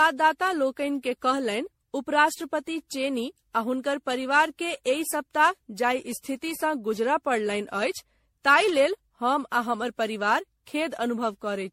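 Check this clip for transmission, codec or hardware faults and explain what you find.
One codec fault is audible, and it runs through the whole clip: generation loss. The speech sounds swirly, hollow and smeared, with blurred consonant attacks and nothing above 16.4 kHz. This is likely from around fifteen rounds of lossy re-encoding, which fits MP3 at about 64 kbit/s, each pass adding fresh quantisation noise and spectral holes on a shifted frame grid.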